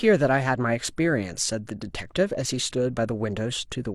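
No technical faults are audible anywhere in the speech recording.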